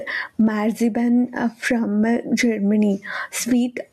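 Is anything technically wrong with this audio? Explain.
Yes. Gain pumping runs through the whole clip: the likely cause is input gain set far too high with a fast limiter clamping down on every loud moment, swinging the level by about 15 dB. The speech sounds squashed.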